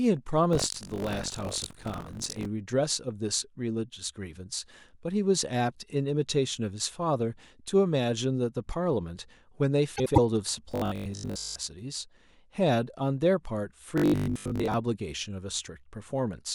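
From 0.51 to 2.46 s the speech carries a steady robotic rattle at 46.9 Hz, which fits a 1024-sample buffer. This is buffer tearing: writer and hardware reader have slipped, so about a fifth of each period replays audio roughly 70 ms old, with hard joins either side.

Between 9.96 and 10.18 s a short garbled flutter is heard. These are frames out of order: two adjacent 96 ms blocks, which points to four frames each, play swapped, and no time is lost.

From 10.72 to 11.56 s and again from 13.98 to 14.74 s the speech turns into a rigid, metallic buzz locked at 50 Hz while still loosely tracking the speech. This robotic sound from repeated short buffers likely comes from audio arriving too seldom, with 20 ms chunks looped to fill most of the gap.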